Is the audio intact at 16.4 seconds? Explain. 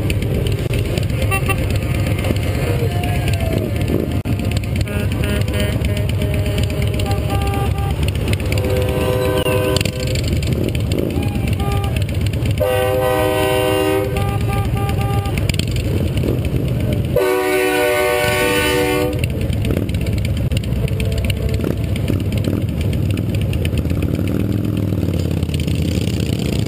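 Yes, at 16.4 seconds the audio is intact, with no dropout, click, distortion or other fault at that moment.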